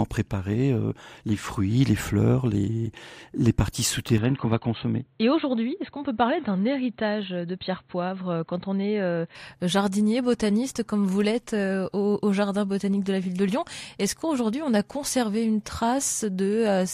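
From 4.18 s to 9.35 s the speech turns boxy, with nothing above 4.2 kHz, drops a few dB in level and gains faint new background noise, likely an input switched to a poorer device. Tone, level and noise all change together, with no gap at either switch, which sets it apart from a simple filter or codec bandwidth drop.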